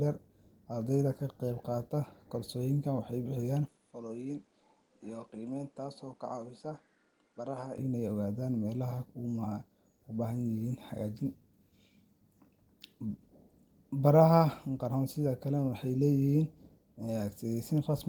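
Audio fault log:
3.68–7.78 s, input switched to a poorer device: The sound abruptly loses its top end, with nothing above 10.5 kHz. The speech turns duller and drops about 5 dB in level. A faint new background noise sits well below it. No gap separates the changes. Both edges are instant, so this is likely a change of input device mid-recording. A second microphone with a narrower band would explain it. At 7.78 s the original brightness and level return.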